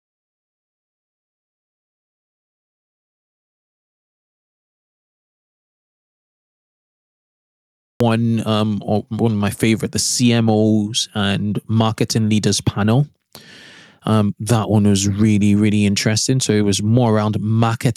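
From the very start to about 8.00 s, the speech is absent. This is an audio dropout to silence. The gap is silent, with no room tone or hiss underneath. The input was likely lost, perhaps through a disconnected device or a mute. The recorder kept writing silence anyway. At 8.00 s the speech cuts in abruptly, already mid-flow. Whatever came before that point is gone.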